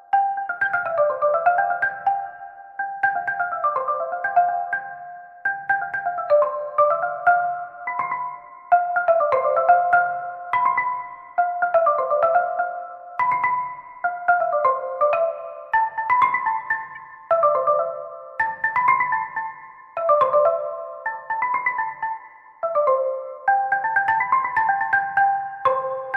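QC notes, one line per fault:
16.95–16.97 s, corrupt frame decoded: a short blip, peaking around -30 dBFS. Damaged bits in a couple of frames put energy at wrong frequencies.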